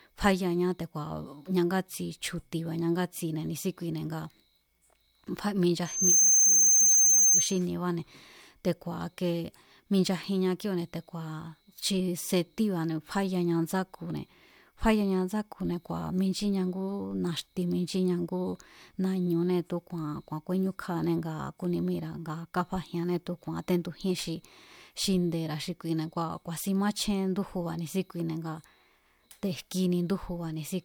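From 5.85 to 7.62 s the microphone-loudspeaker loop gain exceeds one, causing loudspeaker feedback squeal: a 6.3 kHz tone that swells quickly to about 10 dB above the speech.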